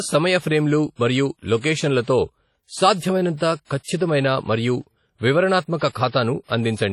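Throughout the speech the sound rings and washes, with a hiss that rises and falls with the level and nothing above 17.9 kHz. This is heavy WMA compression, likely a low-bitrate encode around 32 kbps. The long transform blocks spread quantisation noise over tens of milliseconds and zero out weak spectral lines, leaving a watery, swirling texture. Unlike steady background noise, this hiss breathes with the signal.

Pre-echo appears at 1.58 s, just after "సమయ ఫ్రేమ్లు మరియు", then at 2.02 s, 3.37 s and 3.65 s, the last two both leading into "ఖచ్చితమైన మరియు", and again at 5.78 s and 6.08 s. Each sharp attack fell late in a codec block, so noise scaled for the loud onset also fills the quiet moment before it. A short hiss of 34 to 57 ms leads into each attack, which sounds softened. A reverb tail would follow the sound instead, not precede it.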